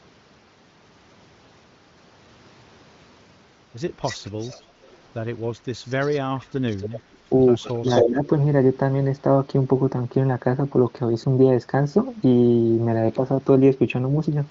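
A speech recording carried over a wideband AMR-WB (HD Voice) path, with nothing above 7.5 kHz. It shows two faults. The far end's echo canceller most likely failed to remove what its microphone picked up from the loudspeaker, so an echo leak sends a delayed copy of the speech back, trailing it by about 265 ms. This happens at 4.02–4.62 s and 6.69–7.0 s, at about 15 dB below the speech, and faintly at 4.82–4.97 s and 5.85–6.2 s, around 30 to 35 dB down. At 7.63–8.1 s the echo is roughly as loud as the speech itself, so that stretch sounds doubled. Overlapping that, from 7.77 to 8.19 s, the canceller likely could not tell the local talker from the returning echo while both were active, and it turned them down together. This speech suppressed in double talk shows as the voice dipping and breaking up, by as much as about 15 dB, for roughly 300 ms in total.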